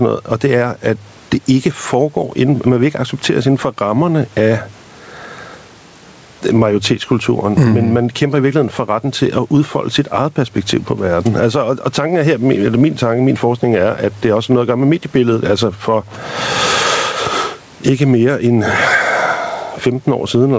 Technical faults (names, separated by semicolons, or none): gain pumping